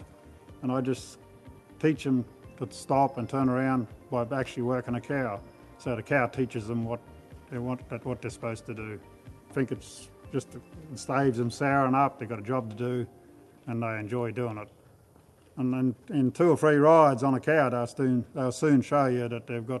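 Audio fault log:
No fault to log.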